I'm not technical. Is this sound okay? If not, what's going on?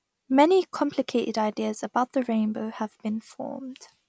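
Yes, nothing wrong can be heard anywhere in this speech recording.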